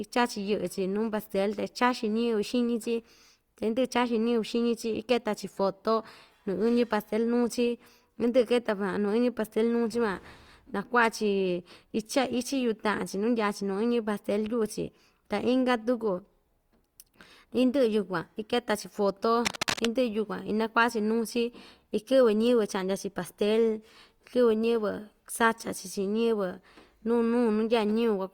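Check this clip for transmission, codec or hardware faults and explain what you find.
There is one hardware fault: cable scratch noise from 19.45 to 19.86 s. For about 0.4 s a cable, connector or control in the signal chain was likely being moved while it had a worn or loose contact, so its resistance jumped about erratically and modulated the signal. The result is a dense, irregular burst of scratching and rustling laid over the speech, only a little quieter than the speech itself, at roughly 5 dB below it.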